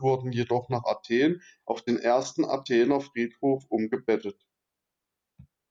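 No faults turn up anywhere in this recording; the speech runs along with nothing technical getting in its way.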